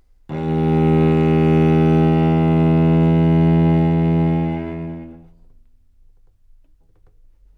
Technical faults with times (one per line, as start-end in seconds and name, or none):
none